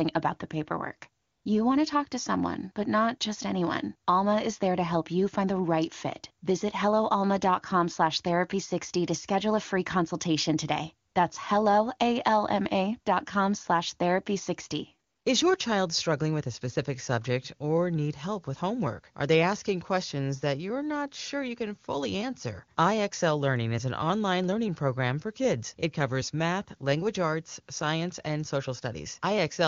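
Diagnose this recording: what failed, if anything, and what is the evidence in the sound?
AMR comfort noise, at the codec's discontinuous-transmission stage, appears in three short pauses: 1.21 to 1.45 s, 11.07 to 11.15 s and 15.09 to 15.25 s. In each gap the sending phone judged the line silent and stopped sending speech frames, so the receiver synthesised a steady, smooth noise from a coarse level and spectral description. On a spectrogram the real background gives way to a flat, uniform band with hard edges. The waveform shows a constant low floor that switches in and out.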